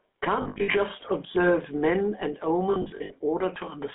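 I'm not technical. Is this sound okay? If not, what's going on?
No. All the way through, the speech has a buzzy, gravelly roughness and sounds thin, like an old mobile phone call. That is the GSM full-rate codec, the original mobile phone voice compression. Instead of sending the sound itself, it sends a rough model of the mouth and throat plus a simplified buzz that drives it. Here the sound is also squeezed into a narrow phone band of about 200 Hz to 3.5 kHz, so the fullness and crispness are gone.

Twice the speech briefly turns into a harsh, metallic ringing or hold: from about 0.42 to 0.76 s, and again from about 2.70 to 3.13 s. These are lost GSM frames, short pieces of the signal that never arrived. The phone fills each gap by repeating the last good piece at a falling level. The losses are scattered through each stretch, about 0.2 s missing in total each time, in runs of up to roughly 0.07 s. 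That produces the stuttering, ringing sound rather than clean silence.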